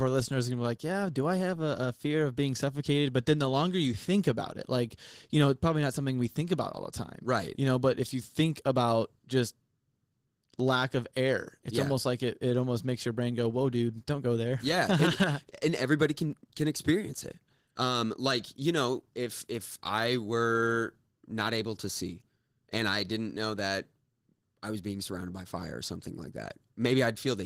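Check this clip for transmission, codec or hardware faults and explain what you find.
There's one codec fault, and it runs the whole way through. The speech has Opus voice compression damage, and it's plainly audible: hoarse, slightly robotic speech. That fits hybrid Opus at around 16 kbps coding the excitation coarsely.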